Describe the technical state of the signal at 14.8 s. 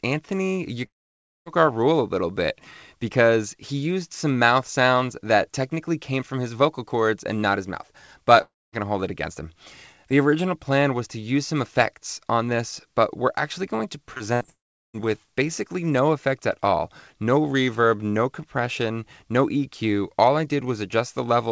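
At 14.8 s the signal is inside a gap running from 14.50 to 14.96 s, most likely a long network dropout. At the start of the gap the last sound is stretched into a short buzzy tail that fades quickly. By 14.8 s only silence or a low steady floor remains. About 0.44 s of audio never arrived and is not recovered; playback resumes after it. The surrounding audio stays band-limited to 8 kHz, consistent with a wideband call codec.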